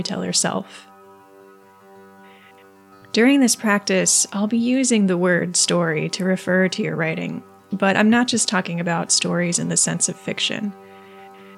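Nothing here trips the ear at all; there's no fault to point to anywhere in the clip.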